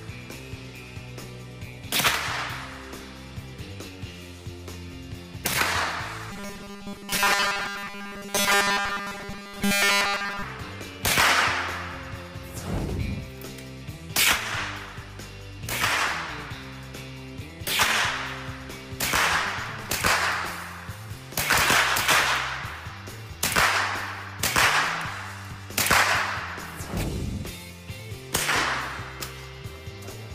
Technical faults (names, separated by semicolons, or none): robotic sound from repeated short buffers